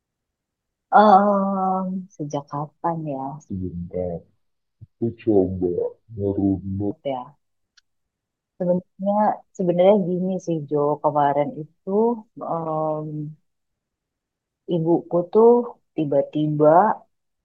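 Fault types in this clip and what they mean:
Section at the wrong speed: from 3.49 to 6.91 s the speech suddenly slows to about 0.64 times its proper rate, and because speed and pitch travel together here, everything drops by roughly seven semitones, so it comes out deep, drawn-out and a bit sluggish before snapping back to normal. The likely cause is that stretch being played back against the wrong clock, say a mismatched sample rate applied to just that segment.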